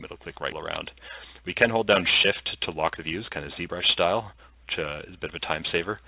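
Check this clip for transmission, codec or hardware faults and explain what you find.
Two faults are audible, a sudden skip and a sustained speed-up, over a narrowband call path whose band stops at 4 kHz, consistent with G.711 A-law at 64 kbps.

Skip ahead, 0.52 to 0.54 s: a stretch of audio was dropped while later packets were already queued, so playback leaps forward with no fill. Roughly a second of sound is missing, and the two sides of the cut butt together almost directly.

Jitter buffer speed-up, 0.86 to 6.07 s: with surplus audio buffered, the receiver repeatedly trimmed pitch-period-sized slices to shrink latency. Everything runs about 111% of normal speed at unchanged pitch, sounding rushed, with roughly half a second removed overall.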